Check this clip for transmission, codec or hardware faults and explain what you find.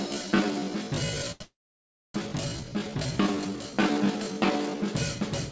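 Three faults are present. The sound passed through a call codec, consistent with G.722, and nothing is heard above 8 kHz.

From 0.0 to 4.9 s there is a time-stretched section. The sound plays at about 0.57 times normal speed, dragging, with pitch held steady, likely from stretch software repeating short pieces.

At 1.32 s comes a short stall from a late packet. A packet arrived late, so the last sound was held about 84 ms, giving a slight buzz or dip before continuing.

From 1.42 to 2.16 s there is a call audio freeze. The last sound continues as a fading buzz or hiss, then about 610 ms of silence, likely from held-up packets emptying the jitter buffer. It resumes where it stopped, with nothing lost.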